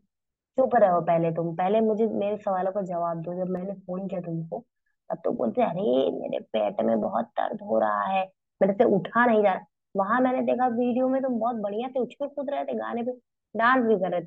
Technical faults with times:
3.57-4.79 channel delay (comb filtering)

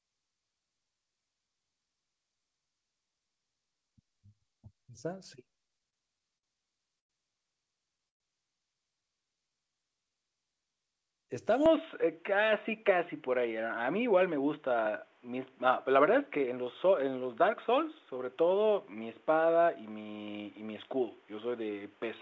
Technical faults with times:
5.68-6.45 repeated stalls (stutter)
6.99-7.11 call audio freeze
8.09-8.22 call audio freeze
9.25-10.15 jitter buffer slow-down
11.66-22.21 input switched to a poorer device
12.03-16.52 jitter buffer speed-up

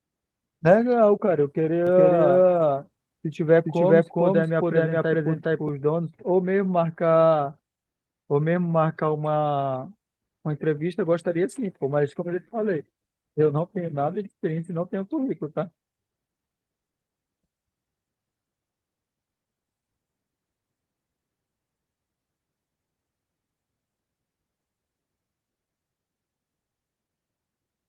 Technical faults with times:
1.87-5.69 doubled audio track

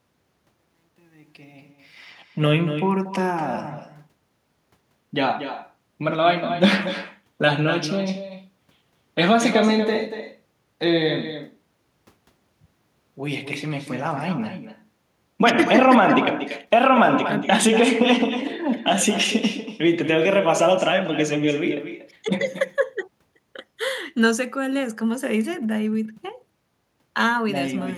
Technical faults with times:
0.00-27.97 echo with no canceller

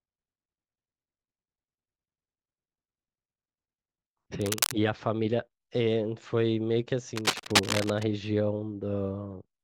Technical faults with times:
4.41-4.73 cable scratch noise
7.16-8.03 cable scratch noise

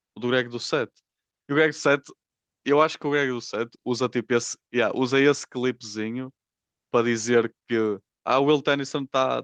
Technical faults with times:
none

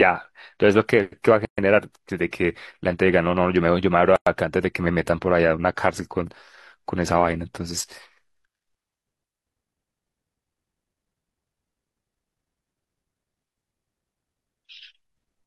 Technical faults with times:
1.45-1.58 gap at a join of encoded pieces
4.16-4.27 gap at a join of encoded pieces

